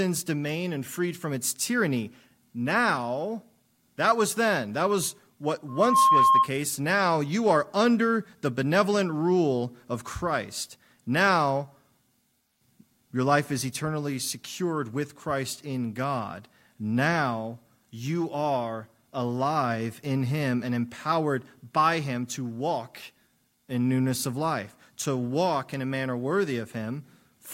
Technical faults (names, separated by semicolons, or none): loudspeaker feedback squeal